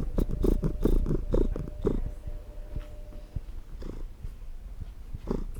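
Recorded sounds, with no audible technical faults.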